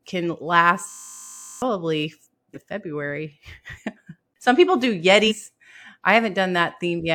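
From 0.9 to 1.62 s, a system hang loop repeats one 20 ms slice of the speech, producing a steady 50 Hz buzz that looks like identical stripes on the waveform.

At 2.53–2.58, 3.74–3.78 and 5.27–5.32 s, compressed frames are skipped. The speech jumps ahead by roughly 300, 150 and 300 ms, which fits whole 46.4 ms frames going missing. Each join is visible as an abrupt spectral discontinuity.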